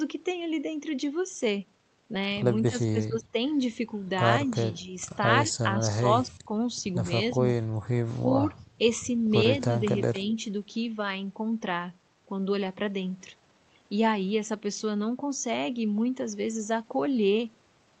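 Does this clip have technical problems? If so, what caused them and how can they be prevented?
Yes. Speech suppressed in double talk dips the sound at 2.69–3.34 s (about 20 dB), 4.45–4.96 s (slight), 5.47–6.50 s (about 25 dB) and 9.69–10.38 s (about 10 dB), likely an echo canceller turning the talker down while the far side spoke. Unlike packet-loss gaps, the level sinks. A double-talk detector that protects the near talker prevents it.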